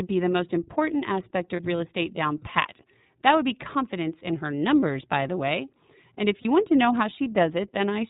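From start to finish the speech sounds band-limited, a little rough and synthetic, with nothing above 4 kHz. This is the iLBC codec, coding each frame's excitation independently; the plainly audible damage fits its 13.33 kbps mode with 30 ms frames.

At 1.56 s, 4.80 s and 6.42 s, each for about 0.04 s, the speech briefly turns into a held, slightly buzzy vowel. These are lost iLBC frames, each gap fitting one missing 30 ms frame. The decoder repeats the last pitch cycle mixed with noise, and the voice recovers at once.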